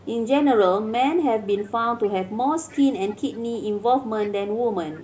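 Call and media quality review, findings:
Echo leak at 0.00–0.08, 1.45–1.71, 2.02–2.08, 2.68–3.62, 4.22–4.31 and 4.93–5.04 s. Faint delayed copy of the speech trailing the original by 298 ms, in short scraps and one longer stretch at 2.68–3.62 s. About 35 to 25 dB below the direct speech, loudest around 2.7 to 4.3 s. Likely cause: far-end loudspeaker playback reaching the microphone, with the echo canceller not fully suppressing it and returning the residue.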